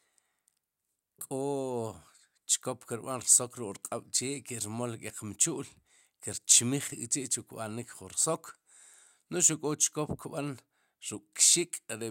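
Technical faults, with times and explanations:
No technical faults can be heard anywhere in the speech. Nothing calls for a time mark or an explanation.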